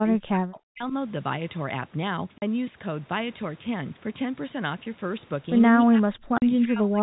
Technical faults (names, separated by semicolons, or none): speech suppressed in double talk; packet loss filled with silence